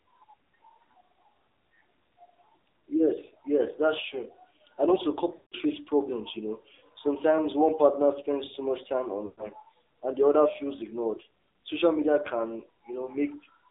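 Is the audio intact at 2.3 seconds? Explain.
No: at 2.3 seconds, as throughout, the speech sounds buzzy, synthetic and boxed into a 300 Hz to 3.7 kHz band, the plainly audible damage of the AMR narrowband mobile codec at a low bitrate, which fits about 7.4 kbps.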